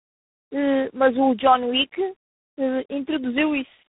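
Tandem speech coding affects this speech recording from start to finish. It was decoded and re-encoded along a chain that points to a G.729A-style low-rate coder, then telephone PCM, then G.726 at around 24 kbit/s. Each stage compounds the last, leaving nothing above 3.8 kHz and making the voice muffled, rough and warbly.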